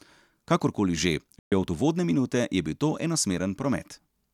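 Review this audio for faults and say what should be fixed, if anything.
There's a Bluetooth dropout in the speech from 1.39 to 1.52 s: the audio just cuts to silence for about 128 ms, with abrupt edges or a fade of a few milliseconds, and comes back further along, as though it had kept playing through the hole. That's most likely a run of wireless packets not reaching the headphones in time, so the receiver had nothing to play and skipped ahead once good data turned up again. To prevent it, keep the headphones close to the source with a clear line of sight and less 2.4 GHz traffic nearby, or monitor over a wired connection.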